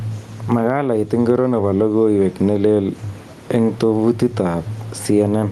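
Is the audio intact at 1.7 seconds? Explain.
No. Gain pumping runs through the whole clip, including 1.7 s. The level swings by roughly 15 dB, squashing loud and soft parts closer together. The likely cause is excessive input gain with a fast limiter pulling the level down.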